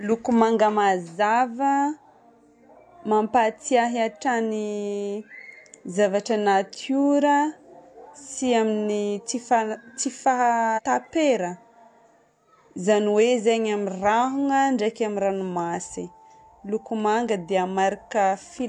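At 10.73 to 10.80 s, compressed frames are skipped. About three frames are not played, so the speech jumps ahead by roughly 150 ms, which fits a frame length of about 46 ms. There is no silent gap, unlike a dropout.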